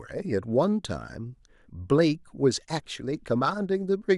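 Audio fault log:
No fault can be heard anywhere in the speech. Nothing in the recording calls for an entry.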